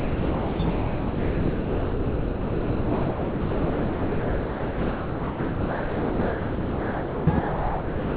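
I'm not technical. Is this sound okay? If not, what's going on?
No. Almost all of the real sound is missing. From the start to 0.59 s, from 0.70 to 7.27 s, and from 7.39 s to the end, it is replaced by steady background noise or near silence, leaving only two brief glimpses of the actual audio. This is most likely sound dropped by the voice detector: the sending side mistook this non-speech audio for background, stopped transmitting it, and the receiver filled the gaps with artificial comfort noise.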